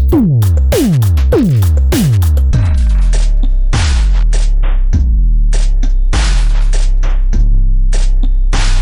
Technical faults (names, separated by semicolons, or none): section at the wrong speed